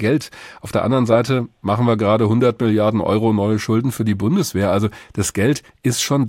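From 0.0 to 2.72 s the speech shows channel delay (comb filtering). One channel ran late by what sounds like a single-sample offset, roughly 0.02 ms, before the two were summed to mono. At so short a delay the first cancellation notch falls around 20 kHz, so there is no audible hollowness or phasiness, only a dulled top end. The upper treble returns to its full extent after 2.72 s.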